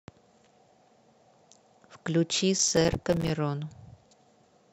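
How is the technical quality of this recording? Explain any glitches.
There's one real glitch here. From about 2.59 to 3.30 s you get processor overload crackle: the machine fell behind on its short audio buffers, around 5 ms each, and dozens came up empty. Each dropout is a hard-edged sliver of silence, so the speech turns gritty and torn until the load eases.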